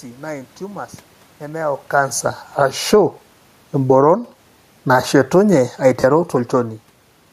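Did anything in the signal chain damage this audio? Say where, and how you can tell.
Yes. In the Bluetooth link, lost LE Audio frames cause two dropouts of about 37.5 ms, at 2.16 to 2.21 s (just after "naa intumors nemeyau") and 6.00 to 6.04 s. The LC3 decoder concealed each gap by repeating the last spectrum with scrambled phase. On a spectrogram, harmonics blur into a grainy noise band for that instant.

Call processing adds automatic gain falling and rising in quick alternation. It falls about 5 dB at 2.46 to 2.92 s, rises about 6 dB at 2.82 to 3.35 s, falls about 8 dB at 3.75 to 4.20 s, rises about 8 dB at 4.11 to 4.57 s, and then sinks about 4 dB slowly from 4.75 to 6.85 s. The room noise floor moves with the voice, which sets these changes apart from a talker moving. On the waveform, the whole envelope, including the gaps, ramps up and down together.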